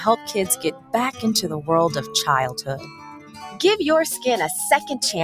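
A speech-tuned noise suppressor has been left running on this audio from start to finish, treating steady material and decaying tails as noise. The level keeps pumping by something like 15 dB, with attacks getting through while held sound sinks and thins.

From 0.54 to 0.94 s, the suppressor cuts this sound hard, down by about 15 dB at its deepest over roughly a third of a second. Again from 2.57 to 3.59 s, it pulls the sound down by about 13 dB for around a second, and the sustained parts and decay collapse.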